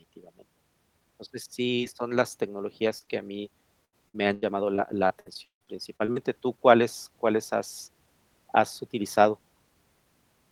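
Short concealed packet loss strikes three times in this speech: at 1.75 to 1.79 s, just before "son las", then at 2.99 to 3.03 s and 3.05 to 3.09 s, the second landing right before "a mí". Each time about 20 ms of audio arrived too late for the decoder, and the receiver papered over the hole by extending the preceding sound before blending back. The result is a fleeting smear or wobble rather than a clean cut.

Repeated packet loss (robotic sound) follows from 3.85 s to 6.18 s, beginning right after "a mí". Throughout this stretch the stream kept losing or delaying packets, leaving about a dozen holes totalling roughly 0.64 s, the longest about 0.16 s. The concealment keeps stretching the last fragment over each hole, and the holes sit close together, so about a quarter of this passage is synthesized. It sounds choppy, with pieces of the speech missing.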